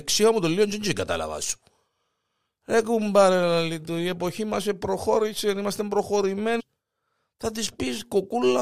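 At 6.59 s the speech jumps abruptly forward, with a brief blip lasting until about 6.61 s. The flow of talk breaks off and resumes at a later point rather than continuing smoothly. This is likely a stream segment skipped: one chunk of a segmented stream failed to arrive or load, and the player moved straight on to the next chunk. The audio that chunk carried is absent, leaving a jump with a small click at the seam.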